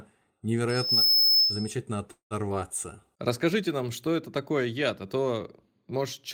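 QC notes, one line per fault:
0.69–1.74 s, loudspeaker feedback squeal: a 5.2 kHz tone swells over roughly a third of a second to about 10 dB above the speech, mic catching its own speaker.
2.11–2.34 s, call audio freeze: the last sound smears on as a fading buzz for about 190 ms, with 110 ms of silence, then resumes intact, likely late packets draining the jitter buffer.
2.49 s, skip ahead: speech jumps forward with almost no gap, roughly 70 ms dropped and the two sides butted together, with later audio already waiting.
2.54–3.01 s, jitter buffer slow-down: speech drags to 91% speed at unchanged pitch, 53 ms stretched in by repeating pitch periods to rebuild the buffer's reserve.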